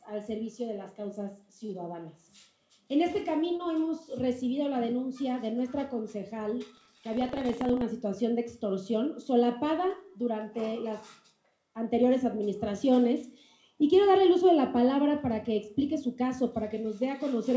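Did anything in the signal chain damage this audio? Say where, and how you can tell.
Yes. At the network and jitter-buffer stage, there are two short stalls from late packets at 1.66–1.71 s and 3.57–3.61 s. Sound is held about 28 ms and 26 ms, then resumes where it left off. Nothing is skipped, unlike a dropout.

At the driver or buffer stage, buffer tearing from 6.73 to 7.82 s gives a steady 25 Hz rattle, present only with signal. A small slice of audio from around a tenth of a second earlier is spliced in with hard joins each period. That regularity separates it from random packet glitches. The call path's cut-off above 8 kHz is consistent with G.722.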